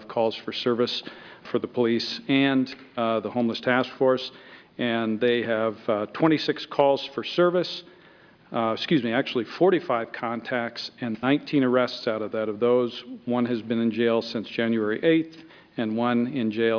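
No technical faults can be heard in the audio.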